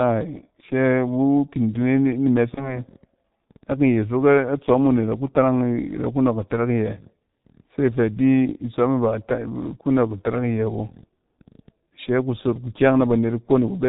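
From start to finish, the speech carries heavy G.723.1 codec damage. The sound points to this codec's 6.3 kbit/s mode. Nothing above 4 kHz survives, so the speech is muffled and dull. The codec models the voice in coarse 30 ms frames and updates that model slowly. Fast changes get smeared. Consonants lose their edges and blur together. Vowels take on a hoarse, rough grain. The damage is constant and strong.

From 2.54 to 2.80 s there is VoIP packet loss concealed by the speech codec. The gap fits a single lost 30 ms frame. With no data for that frame, the decoder repeated its last pitch and filter at falling gain. That stretch is filled with an extrapolated sound that fades. Because each frame builds on the previous one, the distortion outlasts the gap. The speech stays weak and warped for about a quarter of a second before it recovers.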